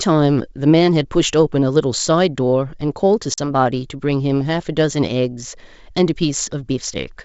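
Packet loss on an ADPCM call hits the speech at 3.34 s: a hard-edged hole of about 40 ms, which fits roughly two lost packets, opens and is filled with silence. Because the decoder's adaptive predictor and step size were not updated through the gap, they no longer match the sender's, so the speech resumes with some distortion that settles by 3.50 s. Outside the gap, the G.722 wideband coding sounds like its full 64 kbit/s mode.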